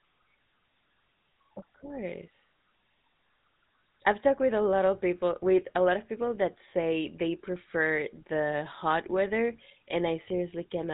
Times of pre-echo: none

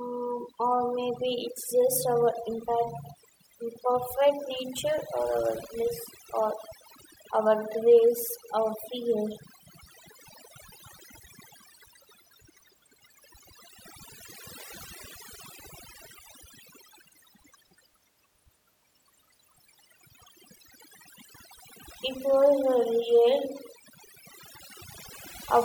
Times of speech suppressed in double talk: none

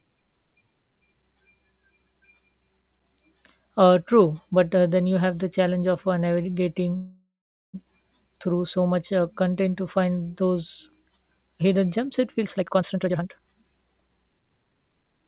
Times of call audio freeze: 6.96-7.75

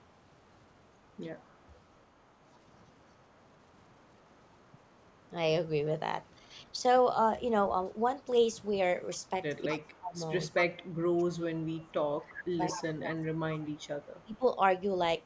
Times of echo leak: 0.00-3.47, 4.72-5.26, 8.59-8.63, 9.72-12.84, 13.75-14.38

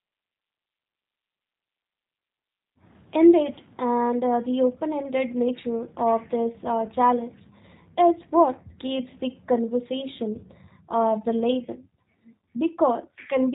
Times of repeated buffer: none

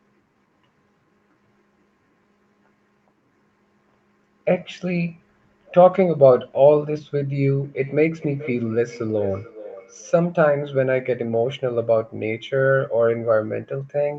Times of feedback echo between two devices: 7.63-10.28

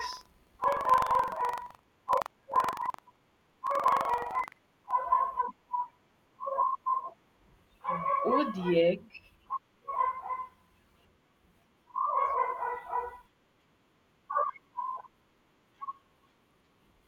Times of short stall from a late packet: none

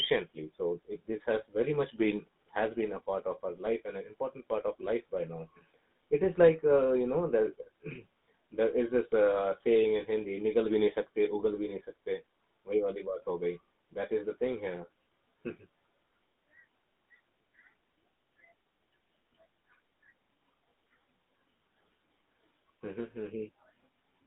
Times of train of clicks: none

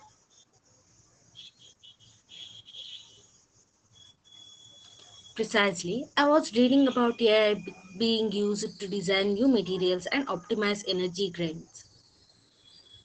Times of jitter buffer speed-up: none

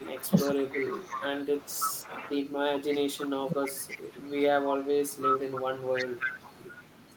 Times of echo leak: 0.00-3.31, 3.64-4.28, 4.63-7.17

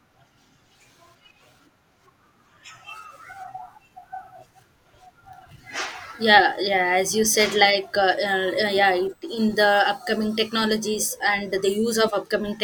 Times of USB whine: 8.90-11.53

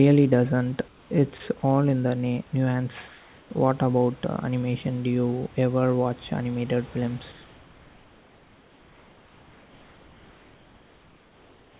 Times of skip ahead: none

